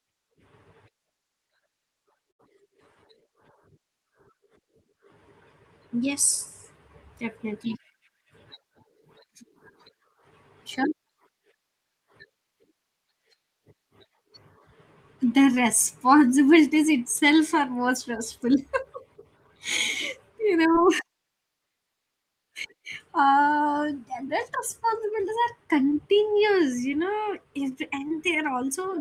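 At 2.31 to 2.41 s there is a burst of packet loss. About 80 ms of audio arrived too late or never arrived. The receiver stretched the last sound for roughly 74 ms while fading it, so a brief held buzz or hiss is heard before the speech resumes with that stretch missing.

Short concealed packet loss follows at 15.55, 20.72, 25.90, 26.91 and 28.08 s. Each time, about 20 ms failed to reach the decoder in time, and 10 to 23 ms of continued sound bridges the gap, heard as a quick smear or wobble.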